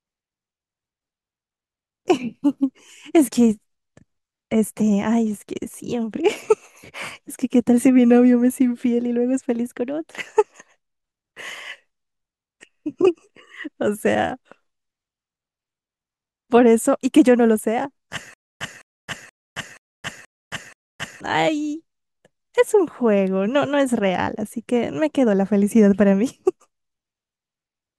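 From 18.34 to 21.21 s, playback likely stalled and replayed its last fragment at each retry: a stutter with silent gaps, a 0.21 s burst returning six times every 0.48 s.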